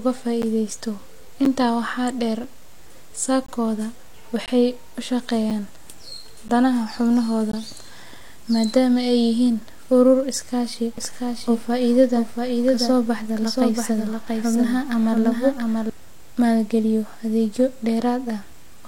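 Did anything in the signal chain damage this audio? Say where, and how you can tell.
Yes, in two places. The first is a gap between stream segments at the network or segmented-streaming stage. Hard-edged silent holes land at 0.42, 1.45, 2.44, 3.46–3.49, 4.46–4.48, 5.50, 6.49 and 7.52 s. That is roughly once per second, which fits 1-second segments whose timestamps don't quite meet, so the player pads each join with silence. On a waveform each hole is a flat, near-silent notch. On a spectrogram it is a thin, clean vertical blank stripe. No audio is lost.

The second is a doubled audio track, heard from 10.98 to 15.90 s, between "urur iskaashi" and "maalgaliyo adeegyo". A full-band copy of the speech trails the original by about 0.7 s at about 5 dB lower, with no reverberant tail or room colouring, and it switches on and off abruptly. Its likely cause is a second, slower capture path or an edit leaving two offset copies. 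On a spectrogram the speech pattern repeats, shifted right and slightly fainter. On a waveform the envelope looks smeared.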